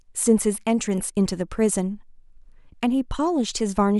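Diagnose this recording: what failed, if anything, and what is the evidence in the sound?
Nothing in the speech recording points to a failure at any stage of the chain, from capture through to playback.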